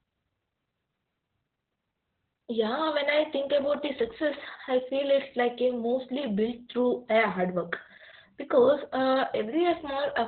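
Heavy Opus voice compression runs the whole way through: narrowband SILK coding at what sounds like 8 kbps leaves nothing above 4.4 kHz, so the speech comes out muffled, hoarse and a bit robotic.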